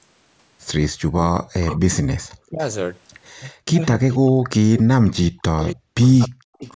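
From 0.93 to 2.6 s and again from 3.37 s to the end, the speech is repeatedly pushed down by as much as about 40 dB, likely speech suppressed in double talk, with the canceller attenuating the near talker while the far end speaks. Inside these stretches an echo leak returns a faint delayed copy: at 1.69–1.79 s about 235 ms late and about 15 dB down, then at 3.45–3.5 s, 4.11–4.18 s and 5.63–6.71 s about 290 ms late and 20 to 30 dB down. This is likely uncancelled loudspeaker pickup.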